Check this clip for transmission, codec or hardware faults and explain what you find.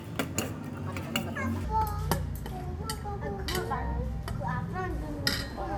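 One fault is present: a wrong sample rate during the first 1.64 s. Audio recorded at 32 kHz appears to be played at 48 kHz without conversion, so sound runs 1.5 times fast and about 7 semitones high.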